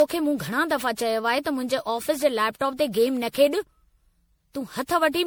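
Throughout the speech, generation loss: swirly, hollow smearing and blurred attacks, likely from around ten MP3 passes, which fits 96 kbit/s, worse than one encode at that rate.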